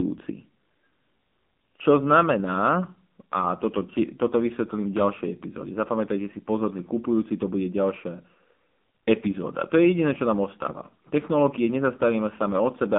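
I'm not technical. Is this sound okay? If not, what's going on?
No. From start to finish the speech has gone through the AMR narrowband mobile codec, the squeeze used on older mobile calls. Nothing above about 3.5 kHz survives, so the voice sounds thin and boxed-in, and the codec runs at a heavy setting, rebuilding the voice from a rough model, which makes it buzzy and synthetic. A plain telephone-style filter would only sound muffled. This also sounds artificial.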